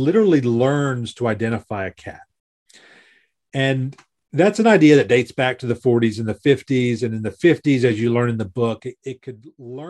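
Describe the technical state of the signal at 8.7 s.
A level drop of about 15 dB is applied in unsmoothed steps, roughly 300 a second, causing zipper noise from 8.57 to 9.54 s, after "you learn in the", heard as a fine ticking buzz on the speech.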